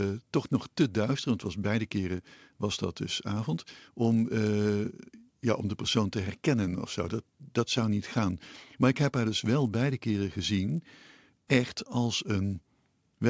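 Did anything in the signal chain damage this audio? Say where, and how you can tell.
Yes, in the sample-rate conversion stage. All the way through the speech there's a buzz at 100 Hz that rides along with the talking and drops away when there's no signal. That pattern fits a resampler restarted on every block: it's converting each 10 ms chunk on its own, probably 24 kHz down to 16 kHz, so at every chunk boundary it's missing the real neighbouring samples and leaves a small error there. Those edge errors arriving 100 times a second fuse into the buzz.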